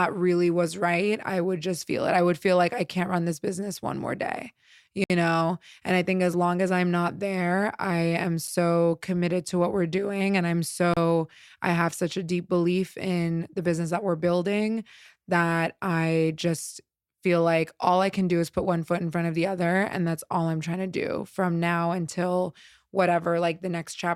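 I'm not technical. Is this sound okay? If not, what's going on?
No. There are three blocks of digital silence: from 5.04 to 5.10 s, right after "business one more day"; at 8.47 s, between "not there I am" and "committed to what we're"; and from 10.94 to 10.97 s. In each one the audio drops to total silence for 60, 7 and 31 ms, then returns with no fade, so you hear a click or a tiny gap. This happens when the playback or recording software falls behind and leaves a stretch of empty audio.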